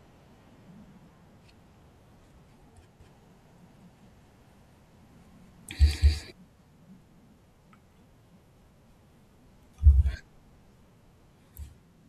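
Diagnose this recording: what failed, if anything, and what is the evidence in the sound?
From 3.0 to 6.32 s there's a doubled audio track: an equally loud, dry copy trails about a fifth of a second behind, likely a second, slower capture path mixed in.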